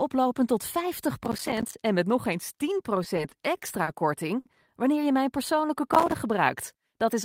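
Speech clip with processor overload crackle from 1.25 to 1.75 s, just before "en met nog eens", and again from 5.89 to 6.19 s. Dozens of buffers of roughly 5 ms each miss their deadlines and drop to silence, giving a gritty tearing on top of the sound. Unlike a network stall, audio is actually lost rather than stretched. Repeated stalls (stutter) run from 3.03 to 3.89 s, after "en met nog eens". Packets arrive late five times, and the receiver holds the last sound for 100 ms in total, with the longest wait 40 ms. Nothing is lost, but the phrase drags and hiccups in a recurring pattern instead of crackling. A short stall from a late packet at 4.39 to 4.47 s, before "wanneer je mijn", stretches one sound by 60 ms after a single delayed packet. This is one held moment rather than a series.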